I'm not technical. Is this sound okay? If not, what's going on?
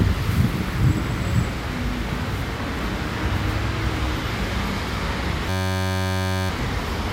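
No. From 5.49 to 6.50 seconds there is a system hang loop. A tiny 10.7 ms slice repeats over and over, making a steady buzz at about 94 times per second.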